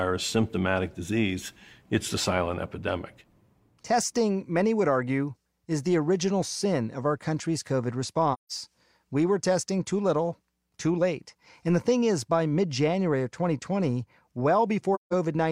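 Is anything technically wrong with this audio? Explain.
Yes. There are two dropouts caused by AAC frame loss with muting. They run from 8.33 to 8.51 s and from 14.94 to 15.13 s. Each lasts about 0.17 s, which fits a run of four lost frames. The decoder had no data for those frames, so it filled them with silence. Overlapping transform windows blend the silence into the neighbouring audio. The speech fades out, drops away, then fades back in, leaving a soft-edged hole.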